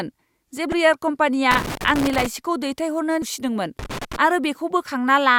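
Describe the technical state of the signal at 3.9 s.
Loose connector crackle runs from 3.79 to 4.16 s, covering the 3.9 s point. A worn or dirty contact is intermittently making and breaking, chopping the speech signal and adding pops from any DC on the line, so it comes through as an irregular burst of scratchy crackle.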